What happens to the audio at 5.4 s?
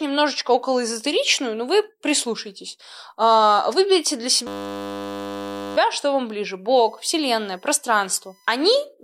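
At 5.4 s the speech is replaced by a steady, mechanical buzz pitched at 100 Hz. It runs from 4.47 s to 5.77 s. This is a system hang loop: the computer or its audio driver stalled, and the sound hardware kept replaying the same 10 ms stretch of its ring buffer over and over. Because that repeated piece is so short, the looping fuses into a continuous tone at the loop rate.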